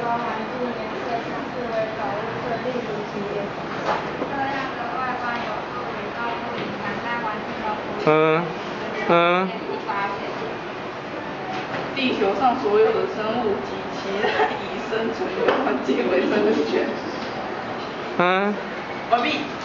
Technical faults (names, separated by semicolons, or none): damaged data in a compressed stream